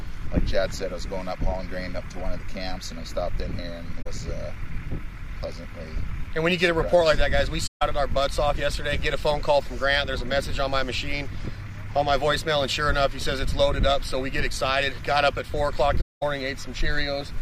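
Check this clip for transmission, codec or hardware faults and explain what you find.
Three short gaps from AAC frame loss with muting, at 4.02 s (about 43 ms), 7.67 to 7.82 s (about 150 ms) and 16.00 to 16.23 s (about 210 ms). Lost frames were zeroed, so overlapping windows fade sound out and back in, leaving soft-edged silences.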